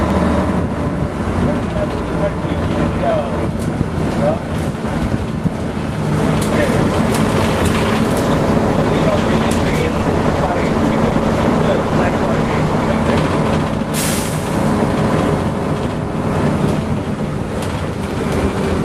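From 8.19 to 13.02 s, a call bitrate drop coarsens the coding and dulls the top end, consistent with an encoder cut from about 48 to 17 kbps.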